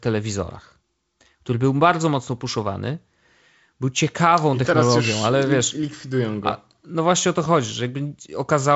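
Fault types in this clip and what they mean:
The speech carries wideband telephone coding, with nothing above about 7.7 kHz and the light upper-band hiss of that coding, and no faults can be heard anywhere in it.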